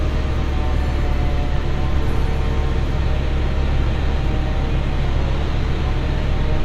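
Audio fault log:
2.97 s to the end: adaptive stream at a lower bitrate. With no gap or dropout, the sound suddenly turns duller and synthetic, with more audible codec artefacts. After the switch nothing remains above 14.9 kHz, and the treble is thin and partly artificial. This fits the player dropping from a high-bitrate AAC stream to a low-bitrate HE-AAC version, in which the upper frequencies are rebuilt from the lower band rather than carried in full.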